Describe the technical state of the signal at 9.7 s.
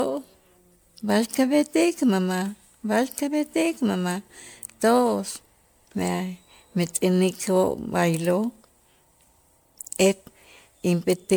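At 9.7 s the speech carries generation loss across the whole clip, likely from roughly ten successive MP3 encodes near 128 kbit/s. Each pass requantises on a shifted frame grid, giving swirly, hollow tone and blurred attacks. A spectrogram shows scattered spectral holes, smeared onsets and nothing above 20 kHz.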